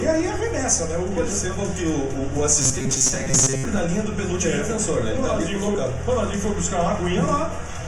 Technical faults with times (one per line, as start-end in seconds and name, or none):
1.78 overlap between stream segments
2.62-3.65 robotic sound from repeated short buffers
3.76 overlap between stream segments
5.75 overlap between stream segments